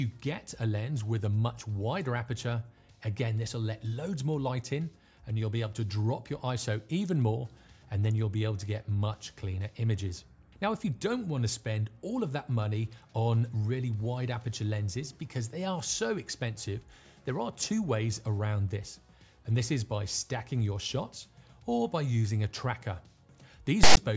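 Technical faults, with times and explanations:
23.83–23.97 s, file tags played as audio: a hard-edged burst of loud, one-sided rasp, then dead silence, as text tag bytes and zero padding are decoded as samples.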